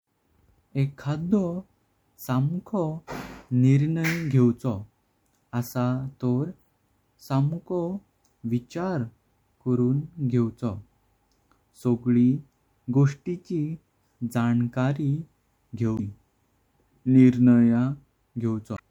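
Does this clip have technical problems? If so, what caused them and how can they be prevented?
Yes. Damaged data in a compressed stream causes brief glitches at 15.95–16.00 s and 18.74–18.80 s: corrupted bytes make the decoder misread frames and resynchronise. Checksummed, error-protected transport or storage prevents it.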